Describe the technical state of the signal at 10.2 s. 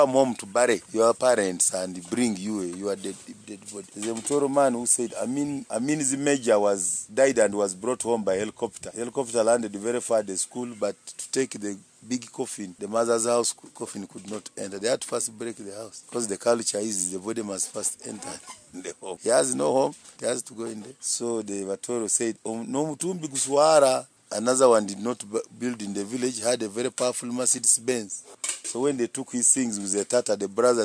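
At 10.2 s the signal is intact, with no audible fault at that moment.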